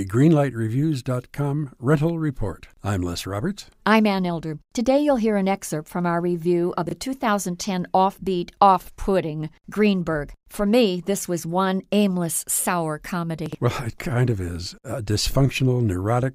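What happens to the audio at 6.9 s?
Right after "from our review of", between 6.87 and 6.91 s, you get chunks out of order: one 21 ms piece arrived a chunk late and plays after its neighbour. Nothing's missing, but the swap leaves three hard joins, so it comes across as a quick jumbled stutter.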